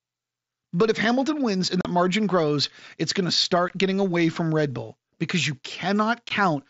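Speech with unconcealed Bluetooth headset packet loss: abrupt silent holes at 1.81–1.85 s (37.5 ms), 3.69 s and 6.29 s, left empty rather than smoothed or repeated as concealment would do, all within the wideband mSBC headset sound.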